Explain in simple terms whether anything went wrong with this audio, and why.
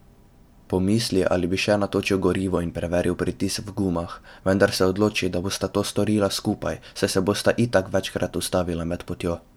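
Nothing went wrong with this speech recording. Listening all the way through, no technical problem stands out at any point.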